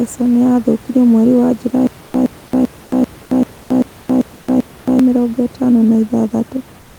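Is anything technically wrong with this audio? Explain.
Yes, there are two faults.

Stutter with silent gaps, 1.87 to 4.99 s, after "nĩ yathũkirio mweri wa" and before "mĩrongo ĩtano na": the stream likely stalled and replayed a roughly 119 ms fragment eight times, each followed by about 272 ms of dead silence, repeating every 390 ms.

Comfort noise in place of the background, 6.81 to 6.99 s: likely discontinuous transmission, consistent with Opus DTX. The real room noise, about 26 dB below the speech, gives way to 177 ms of flat synthetic hiss about 2 dB quieter.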